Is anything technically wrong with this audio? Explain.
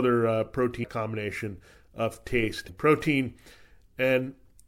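Yes. At 2.65 to 2.70 s, just after "combination of", damaged data in the compressed stream makes the decoder lose frame sync, producing a brief glitch.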